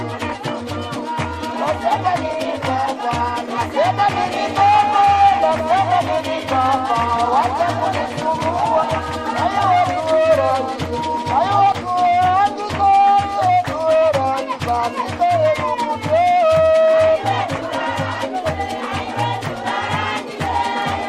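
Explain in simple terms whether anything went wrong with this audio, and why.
From 4.14 to 11.72 s there is a doubled audio track. A second copy of the sound plays about a sixth of a second behind, a bit quieter, starting and stopping abruptly. It was likely captured twice through a slower path.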